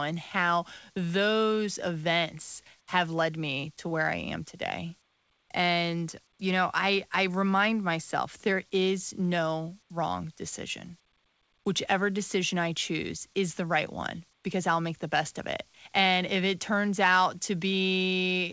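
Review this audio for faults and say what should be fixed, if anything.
Nothing stood out on listening to this speech, which has the top end of a wideband call path that stops at 8 kHz, so there is nothing that needs fixing.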